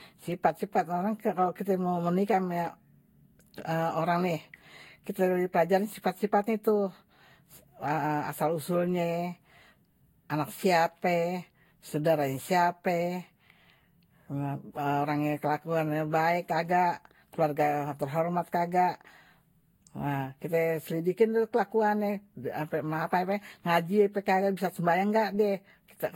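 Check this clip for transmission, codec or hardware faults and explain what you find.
One fault runs through the whole recording: generation loss, likely from the speech being re-encoded around seven times with a lossy codec, with character pointing to Vorbis at roughly 64 kbit/s. Every pass re-quantised the signal on a shifted frame grid, so the errors piled up. The voice sounds swirly, smeared and hollow, and consonant onsets are blurred. A spectrogram would show a hard ceiling at 16.6 kHz, scattered holes and smeared attacks. In the waveform, transients would look softened.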